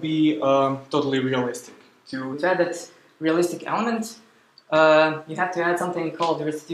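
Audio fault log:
2.33–6.73 s: section at the wrong speed. From 2.33 s to the end, the audio runs 1.12 times faster than the opening, so pace and pitch lift together, about two semitones higher, and everything sounds hurried and slightly bright. Because tempo and pitch move as one, this is a playback-rate change rather than pitch processing, likely from that stretch being read out against a mismatched clock during editing or playback.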